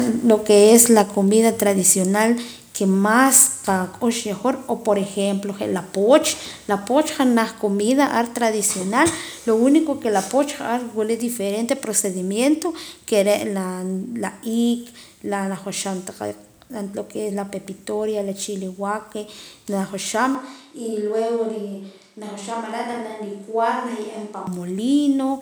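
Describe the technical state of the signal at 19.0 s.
At 19.0 s the speech signal is intact, with no audible technical fault at that moment.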